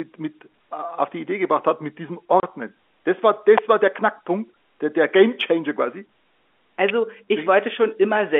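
At 2.40 to 2.43 s, just after "gebracht hat mit diesem", the stream suffers packet loss filled with silence. Several packets never arrived, and the receiver substituted digital silence instead of concealing the gap. The result is a 30 ms dead hole in the speech, a length that fits three 10 ms packets. Its edges are abrupt.

An electrical switching spike follows at 3.58 s, directly before "war der", and another at 6.89 s. A nearby switch, relay or static discharge was likely arcing, and the audio line picked up the burst. Each one is heard as a brief, sharp snap lasting about 8 to 14 ms. The snaps sit on top of the speech and do not replace it, so they have a crackly, foreign edge that is unrelated to the talker.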